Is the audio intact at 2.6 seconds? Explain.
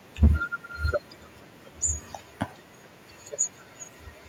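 Yes, at 2.6 seconds the speech plays through cleanly, with no dropout, click, distortion or other fault at that moment.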